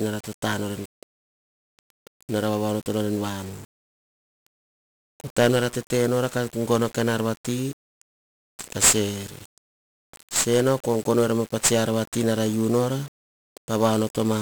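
Speech, carrying heavy 1-bit DFPWM compression from start to finish. Each sample is reduced to a single up-or-down step of an adaptive level, so dense broadband quantisation noise coats everything: the voice sounds fuzzy and crackly, with treble sunk in hiss, which fits a stream of roughly 48 kbps.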